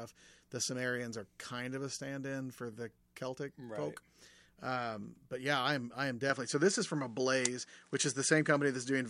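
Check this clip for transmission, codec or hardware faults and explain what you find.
One fault is present. From 6.30 s, right after "I am I am", to the end, the input switched to a poorer device, likely a second microphone. The sound turns duller with nothing above 10.5 kHz. Level shifts by about 5 dB. New background noise sits about 40 dB down. There is no gap at the switch.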